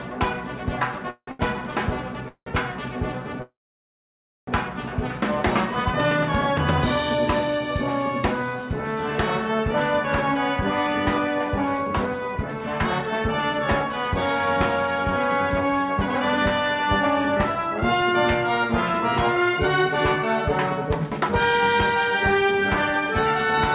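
From 1.1 to 2.48 s the sound drags and stutters in repeated stalls, four short hesitations, the longest about 0.18 s, together about a third of that span. Packets arrived late, the jitter buffer kept running dry, and the receiver stretched the last sound until more came.

At 3.42 s a call audio freeze sets in: a brief continuation of the sound, then almost a second of silence, before it resumes at 4.49 s from where it stopped. The likely cause is packets held up in transit emptying the jitter buffer, adding about 1.05 s of delay without losing any audio.

Three stretches then run faster at unchanged pitch: 10.56 to 14.12 s at about 106% speed, 17.21 to 21.30 s at about 107%, and 22.11 to 23.03 s at about 104%. This is jitter buffer speed-up. Having built up excess delay, the receiver trimmed many tiny pitch-period slices, a fraction of a second in total each time, to catch up.

Throughout, nothing is heard above 4 kHz, which fits the narrowband G.711 codec on the call path.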